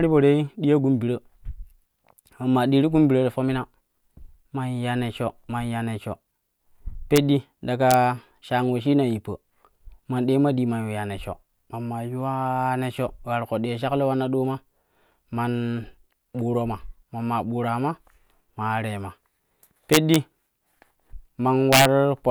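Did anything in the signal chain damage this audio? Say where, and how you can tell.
Yes. Integer overflow in the sample-format or gain arithmetic causes violent cracks on loud speech at 7.16 s, 7.91 to 7.94 s, 19.93 to 20.16 s and 21.73 to 21.85 s. Peaks reaching or exceeding full scale by about 1 to 3 dB wrap to the opposite sign instead of being limited.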